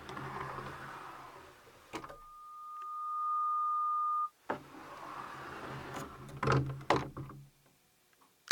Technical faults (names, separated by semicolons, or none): loudspeaker feedback squeal